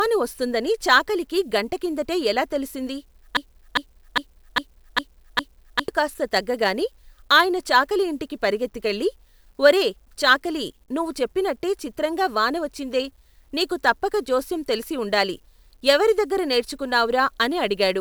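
From 3.37 s to 5.88 s the speech catches in a broken-record loop: a fragment about 0.40 s long plays six times back to back, exactly the same each time, before normal playback resumes. Whatever should have been heard in those seconds is gone. The likely cause is a player or stream that stalled and kept resending its last buffered piece. A spectrogram shows identical blocks tiling every 0.40 s, and the waveform shows the same envelope copied end to end.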